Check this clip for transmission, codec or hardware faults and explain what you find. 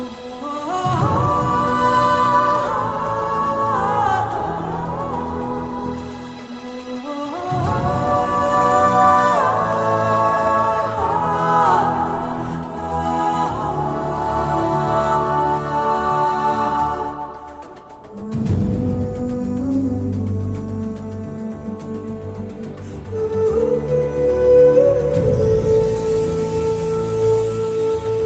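No transmission, codec or hardware faults are audible.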